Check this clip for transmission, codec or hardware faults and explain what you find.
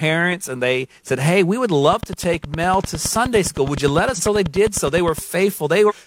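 Two kinds of fault are present. From 1.93 to 5.19 s, just after "we would", a train of clicks ticks steadily at about 9.7 per second, around 40 in all and roughly 10 dB above the speech, likely from electrical interference or a struggling interface. Damaged data in a compressed stream gives brief glitches at 4.14 to 4.21 s and 5.86 to 5.92 s, where the decoder misreads corrupted frames and resyncs.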